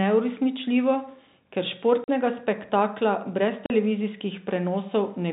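At 2.04 s, right before "spektakla brez", and at 3.66 s, right after it, the speech drops dead for 40 ms: packet loss filled with silence. Each hole fits two missing 20 ms packets, and its edges cut off abruptly against the G.711 telephone band.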